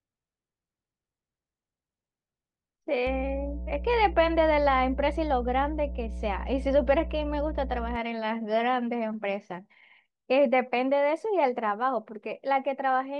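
Mains hum runs through this speech recording from 3.07 to 7.96 s, a steady 60 Hz tone with low harmonics sitting roughly 10 dB under the speech. A ground loop or nearby transformer is coupling the power line into the signal path for that stretch.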